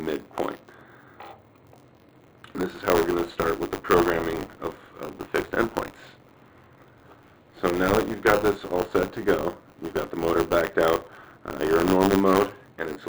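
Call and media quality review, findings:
Buffer tearing, throughout. Writer and playback hardware slipped in the ring buffer; the read crosses the write each period, splicing in a small slice about 20 ms stale. Symptom: continuous robotic 100 Hz buzz under signal, which points to 10 ms periods.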